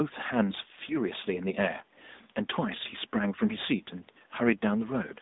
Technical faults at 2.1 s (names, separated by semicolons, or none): AMR narrowband mobile codec